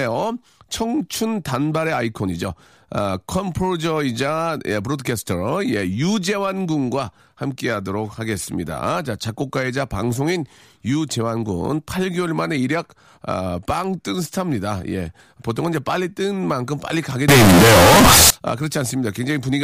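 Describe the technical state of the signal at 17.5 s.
At 17.5 s the speech sits inside a float read as integer fault running from 17.28 to 18.30 s, likely 32-bit float samples interpreted as 32-bit integers. The waveform turns into a near-square block at an almost fixed, high level, and the spectrogram fills with dense broadband energy. Noise becomes as loud as the speech, though the pitch stays traceable.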